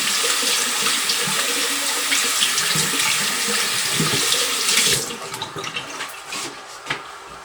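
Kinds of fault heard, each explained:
No faults turn up anywhere in the sound: the signal is clean, with no dropouts, distortion or interruptions.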